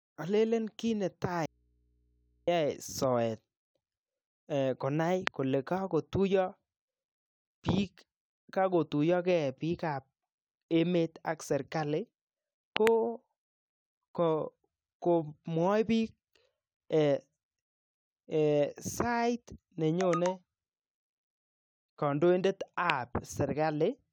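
A speech recording with an audio dropout to a faint residue from 1.46 to 2.48 s: about a second of speech vanishes abruptly, leaving only hum roughly 40 dB down, likely a brief signal loss upstream. On a spectrogram this shows as a blank band crossed by low hum lines. A loud pop occurs at 5.27 s, a double pop at 12.77 to 12.89 s, and another at 22.9 s, each roughly 20 to 25 dB above the speech, likely from connector or static transients. These appear as tall spikes on the waveform and thin vertical broadband streaks on the spectrogram.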